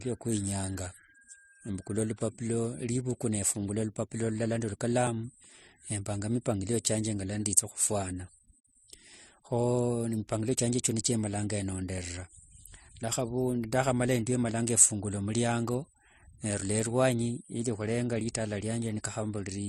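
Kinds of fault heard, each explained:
Transcoding between lossy codecs: dull, smeared highs with the lowest cut-off in the chain kept and mixed artefacts, likely from low-bitrate MP3 audio re-encoded as AAC.
Dropped buffer (overrun): brief jumps with a small skip forward at 5.07 s and 18.21 s, likely from roughly 10 ms of samples overwritten before being read.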